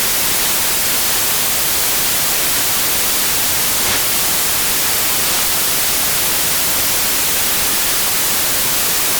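From start to end, every sample is built from the wrong bytes. Low-order bits land in the high positions. The result is loud, harsh broadband noise, close to white on loud sounds.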